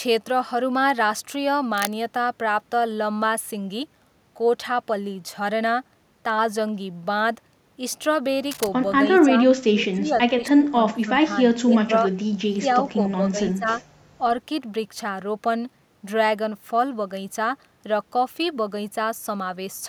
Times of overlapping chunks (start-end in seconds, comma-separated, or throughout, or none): none